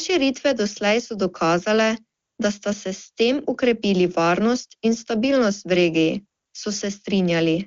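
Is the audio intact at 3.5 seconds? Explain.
Yes, the audio is intact at 3.5 seconds, with no dropout, distortion or other fault at that moment.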